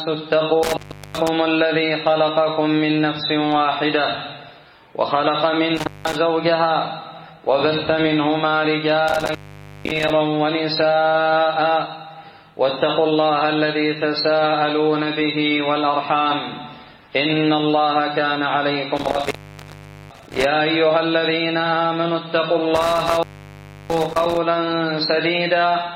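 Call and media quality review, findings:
Intermittent contact, five dropouts. Audio cuts out at 0.63 s, 5.77 s, 9.08 s, 18.97 s and 22.76 s. Gaps of about 0.38 s, 0.18 s, 0.50 s, 0.80 s and 0.67 s. Crackle at each break and reconnect. Faint hiss while open. Probable component: loose cable or plug in the analogue chain. The connection opens briefly, signal drops to the residual noise floor, then contact scrapes back. The longest gaps come late, near 19 s and 23 s.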